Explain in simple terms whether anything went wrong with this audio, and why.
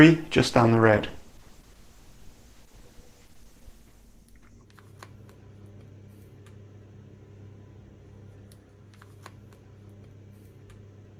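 Yes, there's a call bitrate drop from about 0.42 s to 5.83 s. The connection seems to have gotten squeezed, so the encoder had to describe the sound with far fewer bits. With so little to work with, it gets sloppy with fine detail and throws away the top end, so the sound comes across rough and muffled. It's at its worst for roughly 2.8 s in that stretch, then clears once the bitrate recovers.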